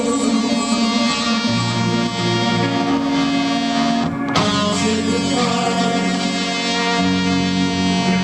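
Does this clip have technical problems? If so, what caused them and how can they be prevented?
Yes. Switching spikes from a dimmer, rectifier or missing shield entered the path twice per 60 Hz mains cycle, causing mains buzz throughout: a steady, raspy buzz with harmonics up to several kilohertz, about 40 dB below the sound. Shielded cabling kept away from dimmers and rectifiers prevents it.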